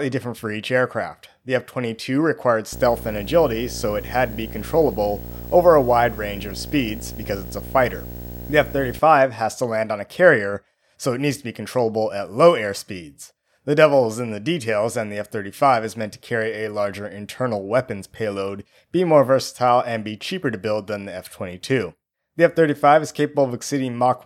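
From 2.73 to 8.99 s there is video or display buzz, ending just before "has to land on". A screen cable couples a 59.94 Hz buzz and hash into the speech, about 15 dB below the speech. A 15.7 kHz whine sits above it.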